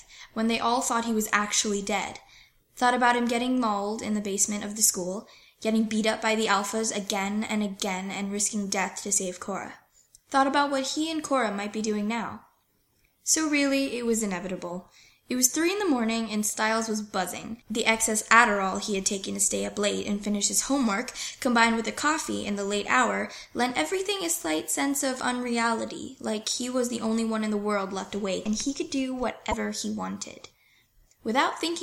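At 29.51 to 29.54 s the audio skips forward and the next instant comes out garbled for about 32 ms. This is likely a broken MP3 bit reservoir: frames of about 26 ms went missing, and the following frame decoded its borrowed bits from the wrong data.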